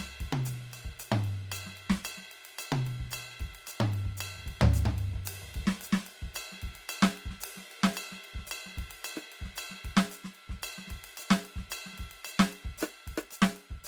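Across the whole music clip the tones sound grainy, rough and noisy, which points to Opus compression in its CELT mode, likely at a low bitrate near 24 kbps. A spectrogram shows bands filled with noise-like texture rather than holes, extending to about 20.2 kHz.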